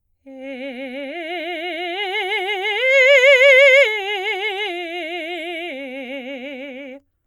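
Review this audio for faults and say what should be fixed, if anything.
Nothing needs fixing: the music signal shows no audible technical faults anywhere in the recording.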